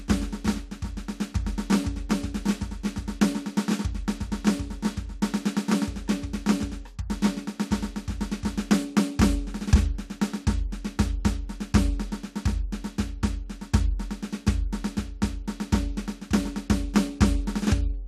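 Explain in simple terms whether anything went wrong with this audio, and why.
Nothing went wrong here; the music carries on steadily the whole way, with no breaks, glitches or odd sounds to point to.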